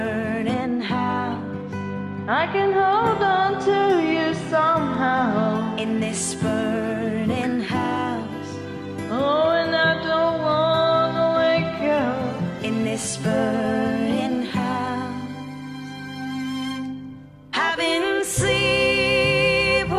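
From 0.54 to 2.92 s the sound turns dull and muffled, its top end rolled away. This is de-emphasis applied wrongly: a treble cut meant to undo pre-emphasis hit audio that had none or was applied twice, sloping the response down by about 10 dB at 10 kHz relative to 1 kHz.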